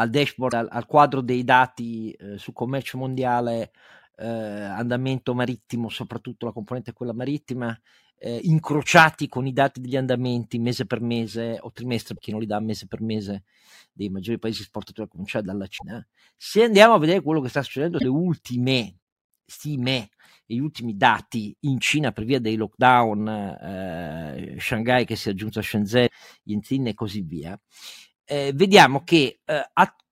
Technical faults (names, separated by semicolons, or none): damaged data in a compressed stream